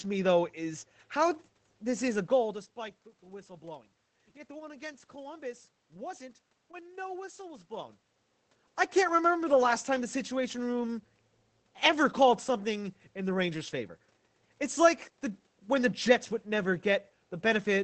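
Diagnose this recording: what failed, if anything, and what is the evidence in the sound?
Nothing failed in this recording.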